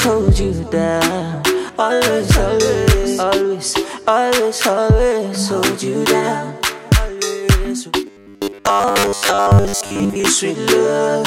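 From 8.07 to 10.26 s, audio likely arrived too seldom, with 10 ms buffers repeated to fill gaps, giving robotic sound: a rigid metallic buzz at 100 Hz through most of the passage.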